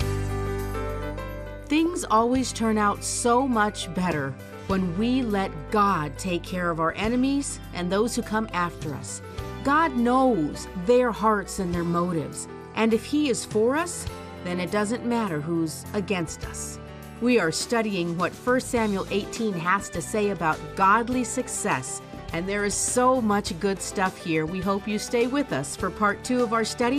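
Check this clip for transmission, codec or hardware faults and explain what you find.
Two faults are audible: coding damage across the whole clip and a brief burst of DAB burbling.

MP2 compression is present throughout. The sound is dull and grainy, with a gurgling quality. This is likely MPEG Layer II coding at a low rate, around 80 kbps. With so few bits, the encoder shuts off upper sub-bands and quantises the rest coarsely. On a spectrogram the top end stops at a ragged ceiling, and the high-frequency blocks flicker on and off from frame to frame.

DAB burbling occurs at 1.86 s as a few watery blips. Uncorrected bit errors at a low error rate reached the MP2 data, which points to a few corrupted frames. Faulty samples put short blips of noise into individual sub-bands. On a spectrogram this shows as isolated bright horizontal patches confined to single bands. The waveform may show a small, abrupt bulge.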